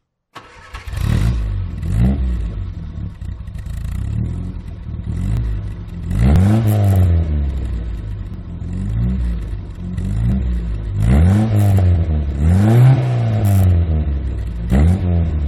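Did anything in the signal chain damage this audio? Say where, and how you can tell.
Yes, at playback: overlap between stream segments on a one-second grid causes tiny skips at 1.43, 2.41, 3.39, 5.37, 6.36, 8.34, 10.32 and 12.31 s, where overlapping segment edges are trimmed and the waveform jumps.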